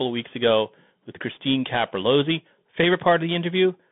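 Throughout, the speech sounds thin and scratchy, with a granular hiss and nothing above 3.8 kHz, which points to the Bluetooth CVSD headset codec's one-bit delta coding.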